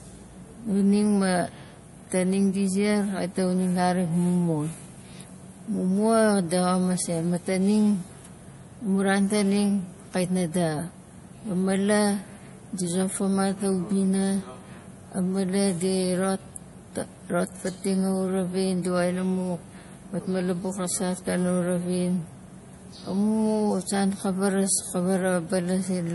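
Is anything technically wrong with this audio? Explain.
Yes. Throughout the speech there is audible compression damage, likely from MP3 compression at a low bitrate, consistent with about 48 kbps. Short of bits, the encoder removes everything above 11.5 kHz and zeroes the weaker frequency lines, which switch on and off from frame to frame. The result sounds watery and swirly, with metallic chirps on s sounds and smeared attacks. A spectrogram shows a flat ceiling at 11.5 kHz and scattered holes that flicker below it.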